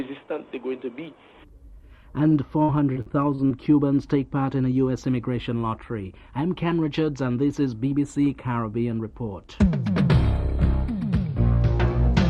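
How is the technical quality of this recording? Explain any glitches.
The recording has one clear glitch, repeated packet loss (robotic sound), from 2.29 to 3.52 s. Six lost or late packets, the longest gap 58 ms, were each patched by extending the preceding sound, concealing about 15% of that stretch. Unlike a single dropout, the holes recur closely, giving a choppy, robotic texture.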